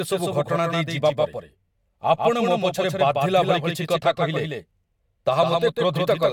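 Speech with a flat, slightly quieter second copy trailing about 150 ms behind throughout, a doubled audio track, likely from the signal being captured twice.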